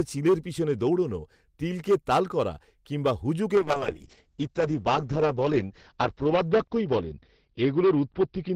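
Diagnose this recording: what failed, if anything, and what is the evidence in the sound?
Hard clipping at the gain or converter stage: the speech is driven about 10 dB past full scale throughout, so a few percent of samples are cut flat, giving harsh fuzz on every loud syllable.

Call bitrate drop in the codec path from 3.56 s, just after "করা কিংবা", to the end: the top end collapses from 20 kHz to 6 kHz, and the sound turns muffled and watery. This fits the encoder falling from 32 to 8 kbps after the bandwidth estimate dropped.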